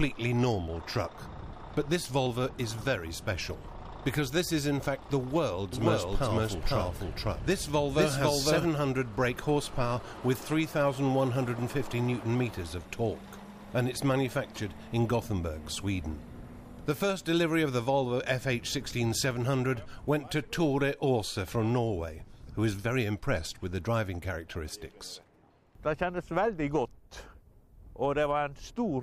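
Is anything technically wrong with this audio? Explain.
Yes. From 5.73 to 8.65 s there is a doubled audio track, likely from a second, slower capture path or an edit leaving two copies out of step. A full-band copy trails about half a second behind at roughly equal loudness, with no decay or room colour, and it begins and ends abruptly.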